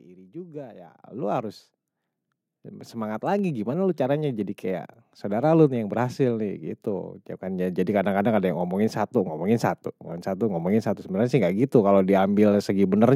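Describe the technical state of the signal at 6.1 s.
At 6.1 s the speech signal is intact, with no audible fault at that point.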